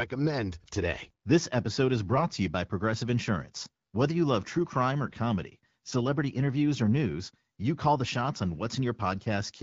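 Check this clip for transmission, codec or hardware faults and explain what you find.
There are two short bursts of AMR bit errors over what sounds like AMR-WB at around 12.65 kbit/s. At 2.12–2.26 s and 5.06–5.14 s, flipped low-priority bits misplace excitation pulses and skew pitch and gain, so the speech briefly turns hoarse and gargly. The second burst has a higher bit error rate, roughly 7% against 4%.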